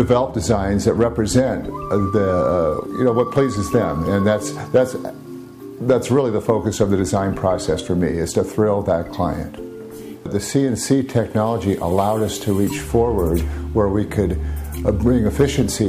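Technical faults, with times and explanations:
Nothing technical jumps out here; every moment of the audio sounds just as it should.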